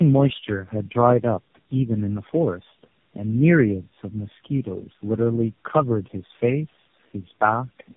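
Tandem speech coding runs throughout: the speech was decoded and re-encoded at each network border, so each low-rate coder compounded the last one's damage. The stacked roughness, muffling and warble point to about four speech codecs in a row, and nothing remains above 3.6 kHz.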